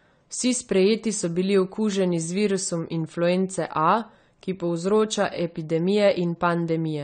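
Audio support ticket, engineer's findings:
Speech dull and smeared throughout, no content above 9 kHz, fizzy warble on sibilants. Likely AAC compression: AAC-LC quantising frequency lines coarsely, lowering the cut-off and leaving spectral holes. Damage plainly audible, consistent with a low bitrate around 32 kbps.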